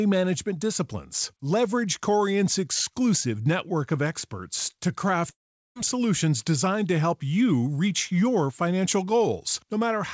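Long network dropout at 5.30 to 5.76 s in this speech clip, after "network of experts to": the sound fades into about 0.41 s of silence, likely from lost packets, and resumes at "solutions designed to help" with about 0.46 s gone. The audio stops at 8 kHz, which fits a G.722 call path at 64 kbps.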